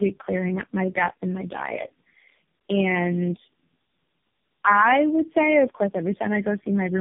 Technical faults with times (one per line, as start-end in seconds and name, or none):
0.00-7.00 tandem speech coding